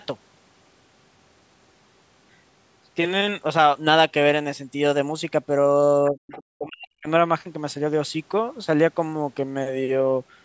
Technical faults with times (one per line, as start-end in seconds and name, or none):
6.11-7.08 speech suppressed in double talk
6.31-6.43 other side's voice leaking through